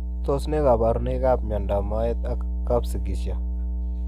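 Mains hum runs through the whole of this speech clip, a steady 60 Hz tone with low harmonics sitting at roughly the same level as the voice. Power-line current is leaking into the signal path, most plausibly through a ground loop or a nearby transformer.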